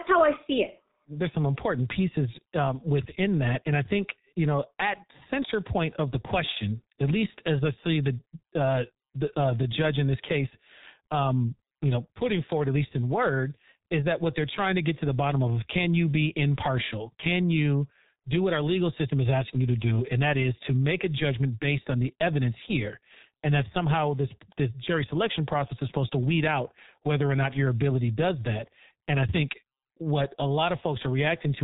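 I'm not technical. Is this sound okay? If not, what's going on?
No, the whole recording has been squeezed through the G.723.1 codec, an old internet-phone format. It throws away everything above about 3.8 kHz and heavily simplifies the voice, so from start to finish the speech sounds muffled and hoarse, with smeared consonants.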